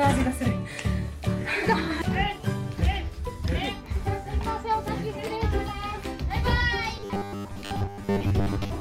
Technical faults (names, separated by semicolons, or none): robotic sound from repeated short buffers